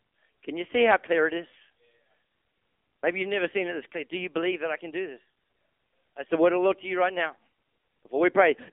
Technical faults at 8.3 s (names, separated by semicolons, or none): AMR narrowband mobile codec